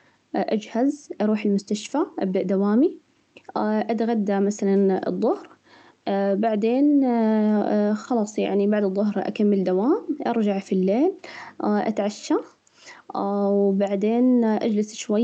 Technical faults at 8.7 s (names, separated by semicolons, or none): none